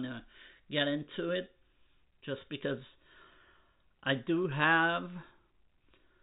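No technical faults turn up anywhere in the speech. It comes over the G.711 A-law telephone path at 64 kbps, so nothing above 4 kHz is present, and any hiss riding with the level is faint at most.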